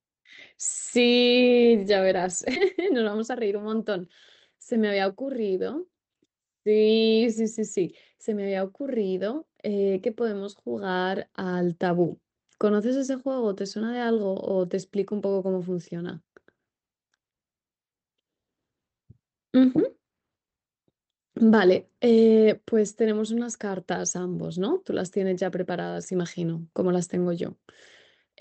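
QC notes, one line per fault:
2.55–2.57 s: skip ahead. Playback jumps forward with no fill in the gap, and roughly 0.4 s of speech is simply gone. The audio on either side is butted together almost directly, so the cut is heard as an abrupt lurch rather than a silence. This happens when a stretch of audio is lost in transit or discarded by an overfull jitter buffer while later audio is already queued, and the overall delay drops by about the same amount.
2.84–3.98 s and 4.56–5.29 s: jitter buffer speed-up. The first run plays at 114% speed and the second at 108%, with pitch unchanged. Together the two runs trim about 150 ms and 70 ms of audio. The receiver was holding more audio than its target and shed the excess by cutting out short pitch-period-sized pieces over and over. That keeps the pitch steady but makes the delivery sound hurried and slightly compressed in time.
11.86–12.42 s: CD scratch ticks. 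Four small ticks or micro-dropouts fall at a regular spacing within about half a second, each lasting only a couple of milliseconds at most. A scratch or blemish has destroyed more data than the disc's error correction can rebuild, once per revolution, and the player interpolates or mutes those samples. The result is a brief, evenly paced ticking across this stretch.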